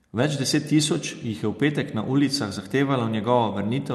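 No technical faults are audible in this speech.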